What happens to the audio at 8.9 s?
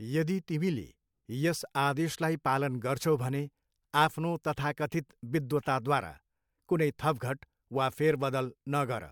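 Nothing goes wrong at 8.9 s; the speech carries on intact through that moment, with no dropout, click or distortion.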